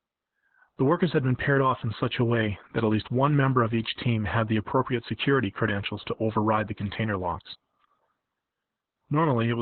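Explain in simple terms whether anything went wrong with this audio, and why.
Yes: heavy Opus voice compression throughout. Squeezed into phone-quality narrowband, nothing above 4.2 kHz survives, so the speech sounds muffled, hoarse and slightly robotic.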